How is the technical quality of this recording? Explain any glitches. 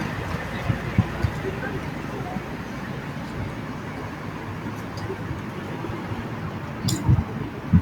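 Nothing here needs explaining: the recording runs along without any glitches, dropouts or other technical hiccups to point to.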